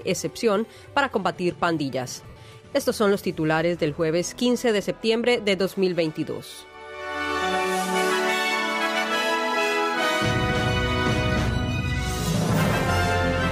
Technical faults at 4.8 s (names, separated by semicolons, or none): lost LE Audio frames